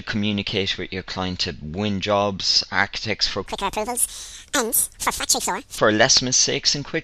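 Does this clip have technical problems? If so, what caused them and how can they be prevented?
Yes. From 3.46 to 5.78 s the sound runs twice as fast and a full octave higher. This is a wrong sample rate fault: the samples are played at double their intended rate without conversion, which fits 24 kHz material played at 48 kHz. To prevent it, resample to the output rate or pass the correct rate to the playback device.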